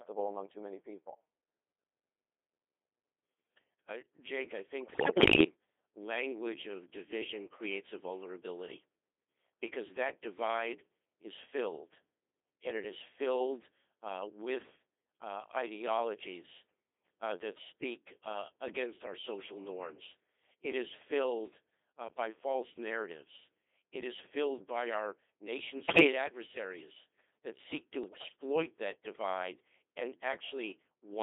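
From start to finish the speech carries the Codec 2 vocoder sound: robotic and buzzy, confined to roughly 300 Hz to 3.6 kHz, with the heavy smearing that fits the 2.4 kbit/s mode. The decoder rebuilds the voice from sine waves driven by pitch, voicing, energy and envelope values, so the original waveform is gone. This steady, even artificiality, unlike packet loss, has no gaps or dropouts.

Bit errors on digital voice radio then break in three times. The first runs from 4.80 to 5.44 s, ending just before "language of division creates". The second runs from 25.88 to 26.12 s, between "filled by our nation" and "adversaries that seek to". The third runs from 28.04 to 28.36 s, before "that divide and". The corruption sounds like around 7 percent of bits flipped. Corrupted parameters make each frame jump in pitch, loudness and timbre, producing bleeps, warbles and garbled robotic noise rather than silence or clicks.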